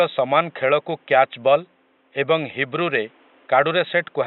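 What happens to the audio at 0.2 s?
Nothing goes wrong at 0.2 s: the speech is intact there, with only the room's own background noise sitting about 38 dB below it.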